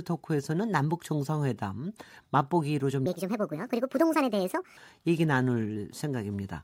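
From 3.06 to 4.77 s a section at the wrong speed plays 1.5 times too fast, likely from a clock mismatch. Unlike a pure pitch shift, the speech gets faster as well as about seven semitones higher.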